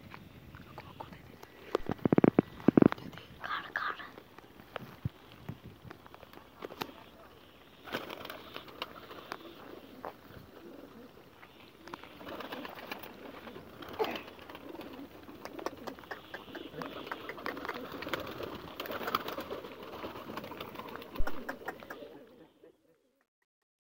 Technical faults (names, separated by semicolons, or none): phantom power thump; truncation distortion on a fade